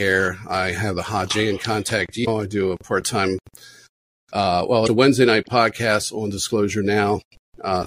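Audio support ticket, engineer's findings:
Damaged data in a compressed stream, two events: 2.24 to 2.28 s and 4.85 to 4.89 s, each about 40 ms. Symptom: short synthetic blip, not part of the sound. Component: decoder input. Mechanism: corrupted bytes in the compressed stream make the decoder misread frames and lose sync, then resync at the next frame header. Two brief, identical-length hits suggest isolated corrupted frames rather than sustained loss.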